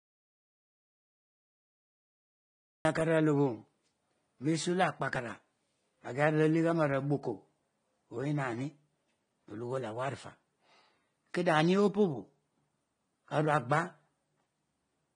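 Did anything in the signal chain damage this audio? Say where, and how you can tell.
Yes. The recording opens in an audio dropout to silence: from 0 to 2.85 s there is digital silence with no room tone, and the speech starts mid-flow. This most likely happened at the input or capture stage, with the source lost while the recorder kept writing zeros.

There is also AAC compression, heard throughout: nothing exists above 10 kHz, and the speech sounds plainly dull and smeared. This is likely a codec-stage artefact, with the encoder lowering its cut-off and coarsely quantising spectral lines, which fits AAC-LC at around 32 kbps.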